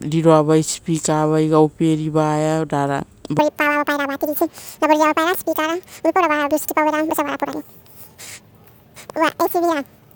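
Playback likely ran on a mismatched clock from 3.39 s onward, a section at the wrong speed: doubled, so speech hurries and rises around ten semitones.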